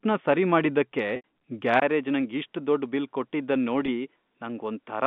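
Right after "ಸರಿ ಮಾಡಿದ್ದಕ್ಕೆ", from 1.16 to 1.24 s, the speech briefly holds on a slightly buzzy, frozen tone. This is packet loss with pitch repetition: about 80 ms of audio went missing, which fits four 20 ms packets, and the receiver filled the gap by repeating the last pitch period.

At 1.8 s there is a 20 ms dropout. After it the speech turns duller and boxier, passes a narrower band, drops slightly in level, and carries a faint new background noise well below the speech. The likely cause is the input switching to a poorer device that passes a narrower band and has its own noise and gain.

From 3.86 to 3.88 s the same repeated-pitch bridging returns for a shorter, barely held instant. This second packet loss covers about 20 ms, consistent with a single lost packet.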